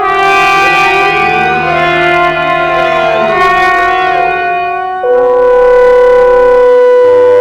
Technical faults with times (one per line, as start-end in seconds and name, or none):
0.00-7.40 hard clipping